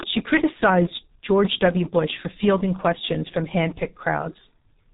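G.723.1 codec damage runs through the whole of this speech clip, and it is heavy. Nothing above 3.8 kHz survives, so the sound is muffled and boxy, and consonants smear into one another. The hoarse, rough texture comes from a coder that rebuilds each block of sound from a coarse, slowly updated model of the voice, consistent with a very low rate of about 6 kbit/s.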